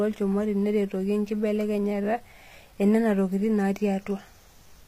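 From the start, the speech has gritty, metallic treble. The s sounds turn lispy. Nothing reaches above 15.4 kHz. This points to HE-AAC compression as the likely cause, at a low bitrate that fits around 24 kbps. That codec keeps only the lower spectrum intact. It fakes the treble by copying lower bands upward under a coarse envelope. The copied harmonics don't line up with the real ones, so the top end sounds synthetic.

At 3.35 s a mains buzz enters and runs to the end. It is a steady, raspy buzz built on 50 Hz. Sharp switching spikes leak in twice per mains cycle, perhaps from a dimmer, rectifier or missing shield. Those spikes spread harmonics of 50 Hz up into the kilohertz range. That is why it rasps rather than hums. It sits roughly 40 dB below the speech, so it is faint.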